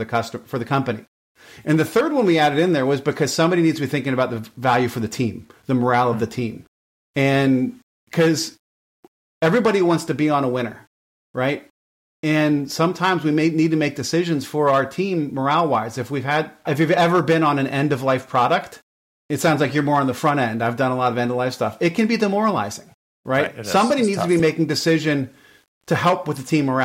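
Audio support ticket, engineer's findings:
Likely requantised to 9 bits by rounding, no dither applied, throughout. Error tracks the signal, sitting roughly 45 dB below it: low bit depth without dither. Quiet speech and decays turn gritty and grainy, with faint tails sputtering between steps or dropping to silence.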